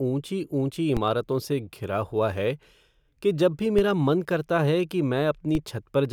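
Three DC steps in the speech, at 0.97, 3.79 and 5.55 s. The zero line jumps by about -16, -16 and -18 dBFS, giving low thumps that fade as a 20 Hz high-pass drains the offset.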